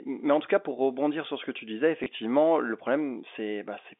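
At 2.04 to 2.06 s the speech gives a small blip. This is packet loss with the last packet repeated: 20 ms went missing and the receiver replayed the preceding block, which fits one lost packet.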